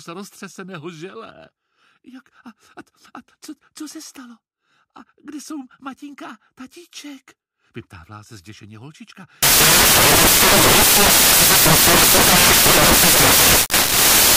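Samples built from the wrong bytes take over from 9.43 s to the end of the clip. The reader assembles each sample from misaligned or reordered bytes, so the rapidly changing low-order bits land in the most significant positions, turning the audio into loud, harsh broadband noise.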